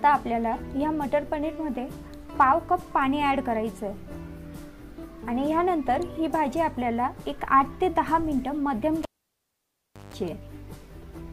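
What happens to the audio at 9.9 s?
A cable pulled and plugged in, from 9.03 to 10.14 s. A pop, about 1.06 s of near silence, a 155 ms 50 Hz mains buzz, then another pop.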